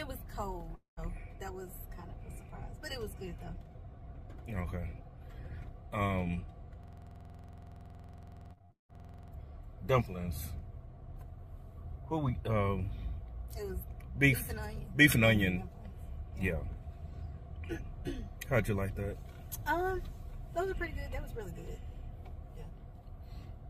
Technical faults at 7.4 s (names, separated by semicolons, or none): system hang loop